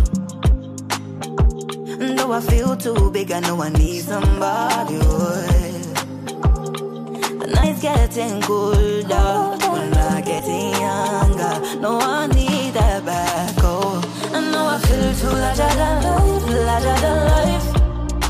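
Compressed frames are skipped at 7.62 to 7.64 s, 9.17 s, 10.38 s and 15.33 to 15.35 s. Each time, whole coded frames of roughly 23.2 ms go unplayed, and the audio jumps ahead by about 70, 70, 150 and 100 ms respectively. On a waveform the envelope steps abruptly. A spectrogram shows a thin vertical seam where the patterns before and after fail to line up.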